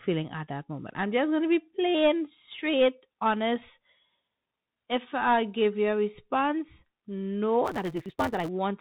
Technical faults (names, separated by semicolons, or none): Bluetooth CVSD headset codec; block size mismatch (truncated)